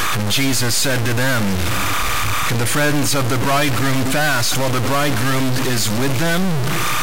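Right from the start and running the whole way through, there's timecode bleed: a faint chirping warble sitting behind the speech, flipping between pitches around 1 kHz and 2 kHz. That's linear timecode leaking in from a neighbouring track or cable, and its steady rhythm fits 30 frames per second. It's quiet, roughly 40 dB under the speech, and it never stops.

Also present throughout is a harsh, buzzy grit riding on the speech, and the pauses don't go quiet but fill with a fizzy noise that's surprisingly loud. The likely cause is a stuck bit, one data bit in the converter or its wiring held at a fixed value, so a big chunk of the samples get knocked off by a step of around -15 dBFS. Because the waveform decides which samples are hit, the damage tracks the sound and turns to noise wherever the signal hovers near zero.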